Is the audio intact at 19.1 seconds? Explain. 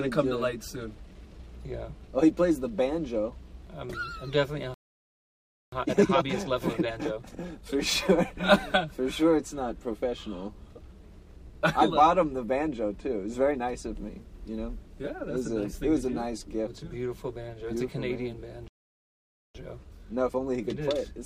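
No. At 19.1 seconds the audio has dropped to silence, part of a gap that runs from 18.68 to 19.55 s, about 0.87 s long. The sound cuts off mid-flow and stays silent for that whole span before playback picks up again. This is a playback stall, likely caused by the player running short of incoming data or by its playback thread being held up, so nothing reached the output until it recovered.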